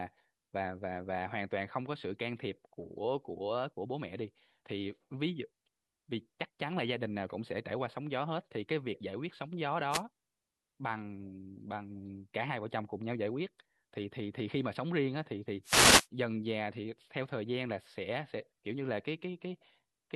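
A speech recording with two wireless microphone noise hits. The first runs from 9.90 to 10.02 s. The second is longer, from 15.63 to 16.08 s. Each sounds like a brief swish of static over the voice. The radio link from an analogue FM microphone is fading. Reflected signals cancel the direct one, so receiver noise rises.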